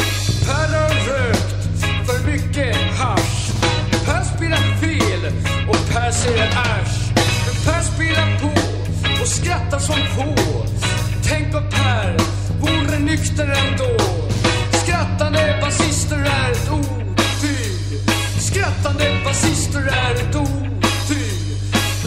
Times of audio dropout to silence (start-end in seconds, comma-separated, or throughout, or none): none